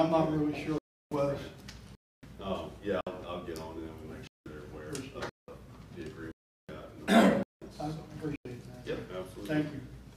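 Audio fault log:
0.78 to 8.45 s, block of digital silence: the audio drops to silence eight times, at 0.78–1.12, 1.95–2.23, 3.01–3.07, 4.27–4.46, 5.29–5.48, 6.32–6.69, 7.43–7.62 and 8.36–8.45 s, with holes from 56 to 372 ms. Each cut is abrupt, with no fade going in or coming out. The repeated 186 ms gaps, plus halves and doubles of that, point to output buffers of around 8192 samples not being filled in time.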